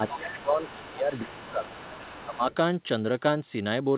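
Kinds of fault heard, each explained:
Speech suppressed in double talk: the talker's speech dips by up to about 15 dB through most of the first 1.7 s, likely an echo canceller ducking both sides.
Other side's voice leaking through: a faint second voice surfaces in scraps from 0.34 to 2.56 s, likely loudspeaker echo the canceller failed to remove.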